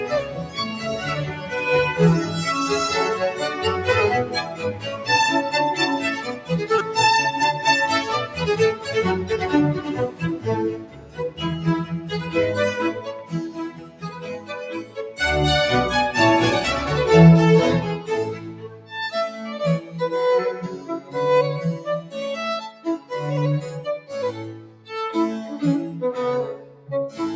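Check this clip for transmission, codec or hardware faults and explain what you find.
Three faults are present: a speech-tuned noise suppressor acting on non-speech sound, stretches of sound it cut, and one repeated buffer. The call microphone processing band-limits the audio to nothing above 8 kHz, which is expected for that path.

The noise suppressor applied to music or sounds stays active for the whole clip. It misreads sustained tones, ambience and decays as background noise and pulls them down, so level swings by around 10 dB. Attacks pass while held material and tails sag, giving a pumping, thinned character.

Sound cut by the noise suppressor occurs in four stretches: 0.22 to 6.5 s, 8.27 to 14.97 s, 18.35 to 24.89 s, and 26.58 to 26.89 s. Within these, roughly two seconds, two seconds, a second and a half, and a few tenths of a second are affected. The suppressor clamps steady or fading portions by about 9 to 10 dB. 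Those passages sink and their decays are cut short, while transients come through nearly intact.

A repeated buffer occurs at 6.79 s. New audio arrived late, so the device replayed its last chunk four extra times. Each chunk was about 5 ms long, which fits a buffer of that size, and roughly 20 ms of real audio was lost. With hard joins at each repeat, this is heard as a brief buzzy click.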